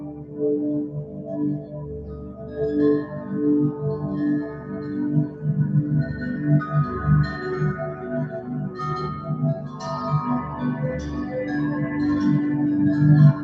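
Throughout, a noise suppressor applied to music or sounds treats sustained material as noise, swinging the level by around 10 dB so held sound pumps and thins. Sound cut by the noise suppressor sinks at 0.0–0.39 s, 1.04–1.28 s, 1.59–1.76 s, 2.22–2.57 s, 4.49–4.89 s, 5.28–5.44 s, 9.17–9.34 s and 9.59–9.8 s, dropping about 5 to 7 dB, all through a call path band-limited at 8 kHz.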